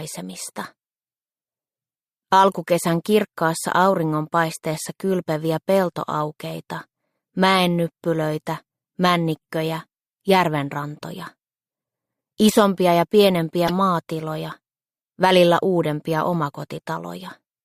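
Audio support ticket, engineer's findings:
Corrupt frame decoded, 4.73–4.76 s and 13.67–13.71 s: short bursts, the second much louder. Decoder played bit-damaged frames, misread codes putting energy at wrong frequencies for a few frames each.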